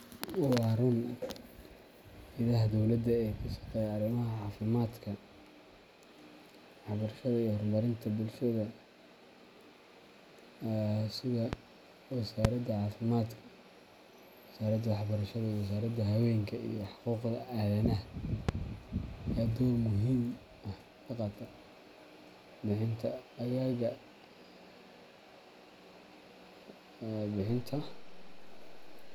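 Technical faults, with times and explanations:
11.53–11.55 s, 12.45–12.47 s and 18.49–18.51 s, loud pop: three single sharp pops, each about 15 to 20 dB above the speech, which carries on underneath. A brief voltage pulse, likely from a connector, switch or static discharge, was added to the signal and shaped by the following circuitry.
27.49 s to the end, DC step: the waveform's zero line jumps by an offset of about -42 dBFS. The sudden shift is heard as a low thump at the onset, while the speech itself continues unchanged.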